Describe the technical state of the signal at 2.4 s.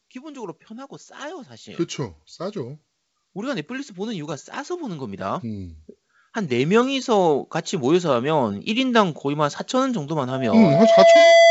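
At 2.4 s the speech and background are swelling together, partway through an automatic gain rise from 0.12 to 5.8 s that lifts the level by about 10 dB.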